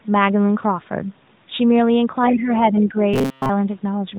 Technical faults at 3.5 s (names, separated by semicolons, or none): robotic sound from repeated short buffers